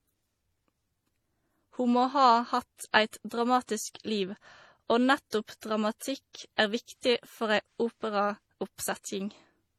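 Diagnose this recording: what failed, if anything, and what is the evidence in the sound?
The codec stage is where this one went wrong, and it runs the whole way through the speech. There are two flavours of artefact stacked on top of each other: a dull, band-limited top end with swirly, smeared consonants, plus a metallic, synthetic sheen up high. That's likely transcoding between lossy codecs, and the character fits a low-rate MP3 around 40 kbit/s re-encoded to HE-AAC at a similar rate. The second encoder wasted bits on the first one's damage, and the lowest cut-off in the chain stuck.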